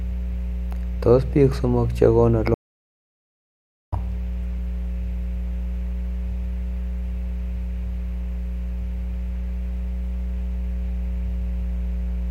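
A strong mains hum at 60 Hz runs under the speech throughout, close to the speech level, from power-line pickup through a ground loop or nearby transformer. From 2.54 s to 3.93 s an audio dropout to silence removes about 1.38 s of speech; the gap is silent with no room tone, likely from the input being lost while recording continued.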